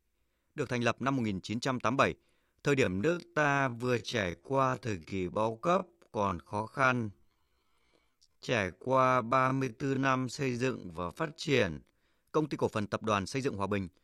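From 2.81 to 11.95 s, a time-stretched section plays at 0.53 times speed. Pitch holds. It drags, likely from software stretching.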